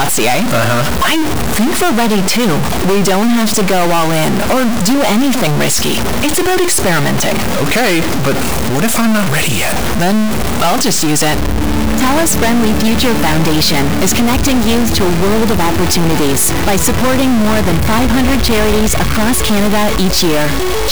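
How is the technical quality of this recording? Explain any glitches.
The technical quality is poor. From start to finish the sound carries a harsh, buzzy distortion, and even the quiet gaps are filled with loud, gritty noise. The likely cause is a stuck bit: one data bit held fixed, so about half the samples are thrown off by that bit's weight, a step of roughly -10 dBFS. Because the error flips with the sign of small values, pauses turn noisy instead of silent.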